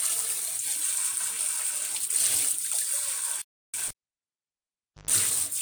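At 3.42 s the sound just stops dead for about 320 ms, picking up again at 3.74 s. That's likely a playback stall, with the player starved of data or its thread briefly blocked. Then from 3.88 s to 5.11 s there's the classic cable pulled and plugged in: a pop, nearly 1.2 s of near silence, a roughly 120 ms burst of 50 Hz mains buzz as the tip touches, and another pop when the sound comes back.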